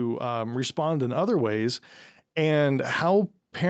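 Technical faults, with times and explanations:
0.2–3.69 s, automatic gain rising: the gain control judged the input too quiet and kept lifting its gain, so speech and background noise swell together over several seconds. The waveform envelope widens steadily, and the spectrogram brightens evenly across the band below 8 kHz.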